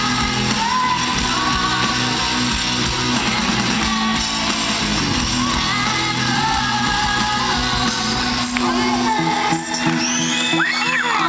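The audio has nothing technically wrong with it; it carried over a G.722 call path at 64 kbps, with nothing above 8 kHz.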